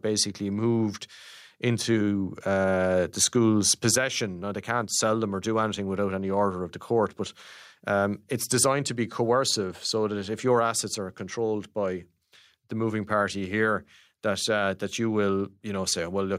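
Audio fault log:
Throughout: gain pumping. The level swings by roughly 10 dB. Quiet and loud passages sit unnaturally close in level, and the sound feels squashed and flat. The likely cause is input gain set far too high, with a fast limiter or compressor clamping down on each peak.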